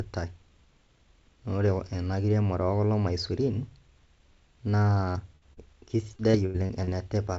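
At 5.12 s comes the first short concealed packet loss. It lasts until 5.18 s. About 30 ms of the call never reached the decoder in time. The receiver patched the hole by extending the last sound for roughly 28 ms, then blended back into the real audio. It comes across as a quick smear in the speech. The same fault returns at 5.53 s to 5.60 s, with about 30 ms lost and 33 ms filled. Again there is a brief wobble.

From 5.36 s to 5.44 s there is a burst of packet loss. Around 60 ms of audio went missing in a row, probably several packets together. The receiver carried the previous sound forward for about 56 ms and turned it down as the hole went on. The result is a short held buzz or fading hiss. The speech then picks up further along, with the stretch in between gone.

Between 6.17 s and 6.90 s there is repeated packet loss with a robotic sound. Five separate gaps fall inside this span. 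Together they remove about 210 ms. The longest single gap is 84 ms. Each hole is filled by stretching the last sound, and the next one arrives soon after. Concealment covers about 27% of the span. The speech turns choppy, with pieces missing. All of this sits on a call path with nothing above 8 kHz, which fits G.722 at 64 kbps.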